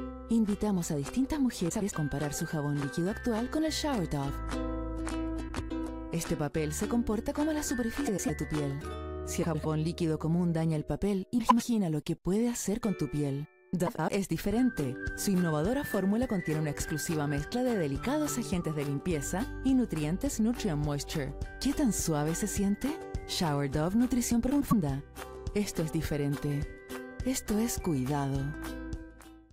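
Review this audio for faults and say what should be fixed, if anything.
Frames out of order at 1.69–1.92, 5.48–5.71, 8.07–8.30, 9.43–9.66, 11.38–11.62, 13.87–14.09 and 24.50–24.73 s. Two adjacent blocks of about 105 ms each play swapped, giving a garbled flutter. Reorder packets by sequence number before decoding.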